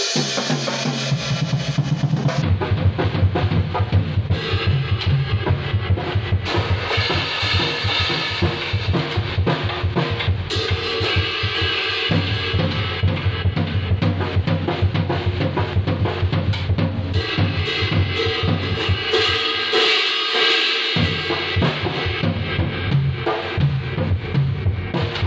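From 2.42 s to the end, a wrong sample rate slows the audio to two-thirds speed and drops its pitch by about 7 semitones, which fits 24 kHz material played back at 16 kHz. Unlike a pitch shift or time-stretch, tempo and pitch fall together.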